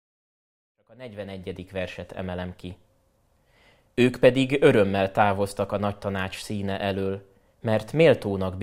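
Nothing here counts as a fault; the speech just eases in with a smooth fade that starts around half a second in and reaches full level by 2.1 s, the way an editor would shape an opening.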